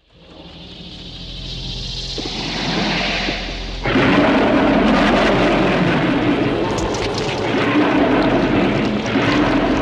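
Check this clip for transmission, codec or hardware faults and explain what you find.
Nothing stood out on listening that would point to a problem in how the audio was sent, encoded or recorded.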